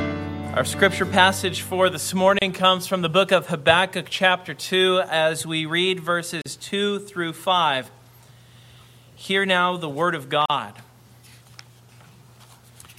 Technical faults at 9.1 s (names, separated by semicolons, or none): none